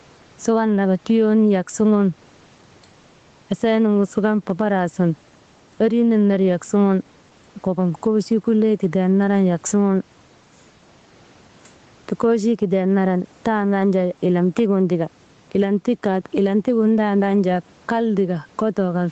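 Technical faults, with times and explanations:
Throughout: gain pumping. The input gain was likely set far too high for the microphone, so a fast limiter or compressor clamps it down whenever the speech gets loud and lets it back up in the pauses. The level swings by around 10 dB, and loud and quiet parts are squashed closer together.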